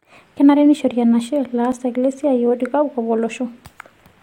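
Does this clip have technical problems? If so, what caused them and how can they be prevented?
Yes. At 1.72 s, just after "neishori enashe", the speech gives a tiny skip forward. This is an overlap between stream segments: the boundary timestamps of two consecutive pieces of the stream claimed the same stretch of time, and the player discarded the apparent duplicate, removing about 19 milliseconds of audio that existed only once and leaving a jump in the waveform. The timing fits a boundary between 2-second segments. To prevent it, the packager should produce contiguous, non-overlapping segment timestamps, or the player should crossfade rather than cut at the overlap.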